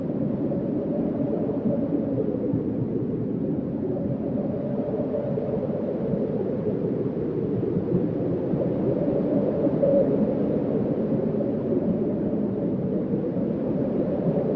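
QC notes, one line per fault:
Nothing to flag here: the sound just carries the usual call microphone processing, with nothing above 8 kHz and the lowest bass trimmed away as that path normally does.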